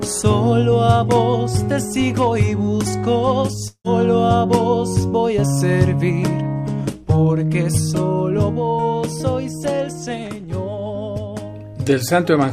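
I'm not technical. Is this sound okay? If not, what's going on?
No. A long network dropout likely interrupted the audio at 3.67 s. The sound fades into a buzz, goes silent, and returns at 3.87 s missing a piece.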